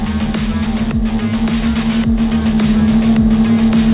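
Aliasing runs throughout the clip. The sample rate was lowered, likely from 44.1 kHz to 8 kHz, without first filtering. Content above 4 kHz folds back as unrelated, gritty tones roughly 25 dB below the sound, and the spectrum runs hard up to 4 kHz.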